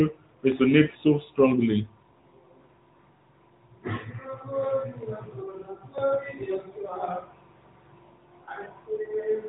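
Throughout the speech, the AMR narrowband mobile codec is plainly audible. Nothing passes above 3.8 kHz, so consonants lose their crisp top, and the vocal-tract model rebuilt from a few pulses per subframe gives the voice a buzzy, synthetic edge. The artefacts suggest a mid-range AMR-NB mode near 10 kbps. A plain low-pass filter would only dull the sound, while this codec also reshapes its texture.

At 0.52 s and again at 5.98 s the sound jumps forward, with no gap of silence. About 10 ms goes missing each time, and the two sides of the cut are butted straight together. The likely cause is a dropped buffer (overrun), where samples were overwritten before the program read them. An underrun would instead leave a brief silent hole before the audio resumes.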